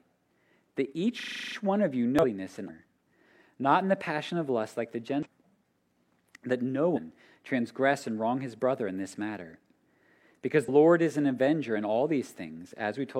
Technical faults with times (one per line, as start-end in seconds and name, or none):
1.20-1.56 system hang loop
2.19-2.25 damaged data in a compressed stream
2.65-2.70 damaged data in a compressed stream
5.20-5.26 damaged data in a compressed stream
6.92-6.98 damaged data in a compressed stream
10.64-10.69 damaged data in a compressed stream